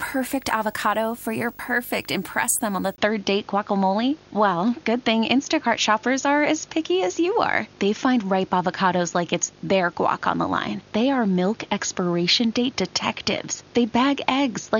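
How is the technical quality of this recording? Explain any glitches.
The technical quality is compromised by two problems: a display buzz that runs the whole way through, and a drop in fidelity a few seconds in.

The video or display buzz sits under the speech from start to finish. A screen or video cable is leaking into the audio path, so you get a buzz at the 50 Hz field rate with a gritty hash on top, plus a thin whine up at 15.6 kHz from the line scan. It sits roughly 25 dB below the speech.

At 2.96 s, right after "impress them on the", there's a 20 ms dropout and the sound goes dull and boxy for the rest of the clip. That's most likely the input switched to a poorer device, such as a second mic or a headset's call profile taking over. Nothing gets through above 6.8 kHz, so the air and the top of the sibilance are lost. The new device also brings its own background noise, around 30 dB under the speech. 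The level stays about the same, so it's the tone that gives the switch away.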